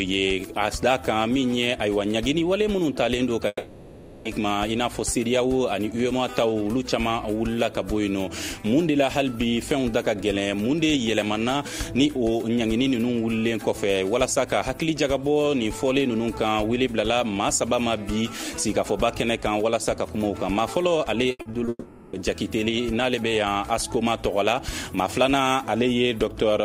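From 3.47 to 4.27 s, what is likely a long network dropout cut off the incoming stream for about 0.8 s. The receiver stretched the last fragment into a fading buzz that fills nearly the whole hole before a brief moment of silence, and the audio resumes with that stretch simply gone.

At 21.31 s, repeated packet loss sets in and runs to 21.69 s. The stream kept failing to deliver in short bursts: four gaps, the longest 80 ms, with roughly 42% of that span patched by repeating the previous sound. The result is a choppy stutter with pieces missing.

This leads straight into a second likely long network dropout from 21.69 to 22.15 s. About 0.44 s is covered by a decaying buzz, then a short silence, before the sound returns without the lost part.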